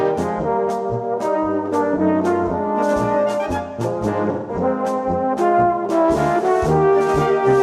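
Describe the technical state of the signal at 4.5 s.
At 4.5 s the sound turns smeared and noisy, a hollow patch running from 4.32 to 4.56 s. This is AAC frame loss with concealment: roughly 170 ms of data, consistent with four lost frames, went missing, and the decoder patched the gap by reusing the last good spectrum.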